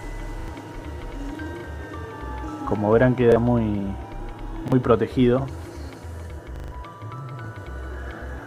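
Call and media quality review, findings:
Repeated buffer, stuttering at 0.40–0.48 s, 1.60–1.64 s, 3.32–3.36 s, 4.68–4.72 s and worst at 6.56–6.72 s. Playout underrun: the device replays its last chunk with a hard join each time. Repeat length fits a 40 ms buffer. The last one drops roughly 150 ms.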